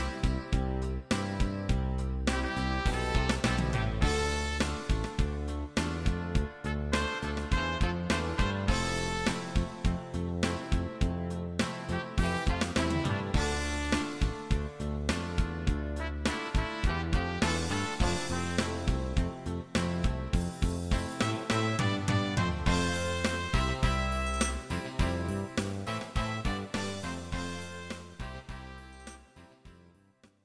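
No technical faults can be heard anywhere in the signal, which stays steady and intact from its opening moment to its close.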